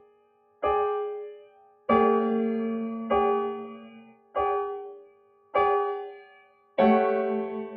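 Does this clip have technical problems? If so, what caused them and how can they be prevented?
Yes. Across the whole clip the level pumps and flutters, with the sound swelling and thinning by around 20 dB as it goes. This is a noise suppressor designed for speech left active on non-speech material. It mistakes sustained tone, ambience and reverb for background noise and pushes them down, while sharper onsets slip through, so the gain keeps riding up and down. Bypass speech noise suppression whenever the input is music or general sound.

In five stretches the suppressor cuts deepest, and the sound sinks by about 18 dB: 0.0 to 0.63 s, 1.32 to 1.89 s, 3.73 to 4.36 s, 4.84 to 5.55 s and 6.09 to 6.78 s. This is sound cut by the noise suppressor. In each span the held or decaying material is judged to be noise and pulled down, so sustains drop away and tails are chopped short. Disable the suppressor or switch it to a music-safe mode before recording such material.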